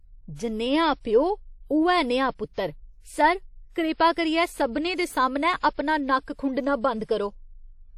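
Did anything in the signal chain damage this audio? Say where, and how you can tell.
Yes. WMA compression throughout, at the codec stage: ringing, washy smearing, breathing hiss and nothing above 17 kHz, which fits a likely 48 kbps transform encode.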